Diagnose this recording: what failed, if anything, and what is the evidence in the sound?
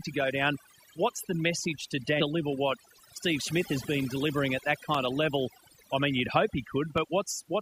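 Overdone noise removal runs throughout, in the processing stage after capture. The background drops and breaks up into twinkling specks. That is the signature of a noise reducer set too aggressively: it pulls individual frequency bands far down whenever they come close to its noise estimate, so low-level parts of the speech are removed along with the noise, leaving isolated spectral fragments.

At 2.20 to 2.24 s the sound jumps ahead abruptly, with a small blip at the join rather than a gap of silence. This is heard as a stream segment skipped, likely in network delivery or playback. The player appears to have failed to load one segment of a segmented stream and continued straight into the next, so the material in between never arrives and the audio resumes further along.

Dropped samples give single sharp clicks at 2.53 s, at 4.95 s between "been delivering at that" and "of level", and at 6.98 s. 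Each loss is only a fraction of a millisecond, far too short to remove audible content. The waveform steps straight from one value to a later one, producing a thin vertical line across the spectrum. The cause is likely a driver or buffer handoff that skips a few samples.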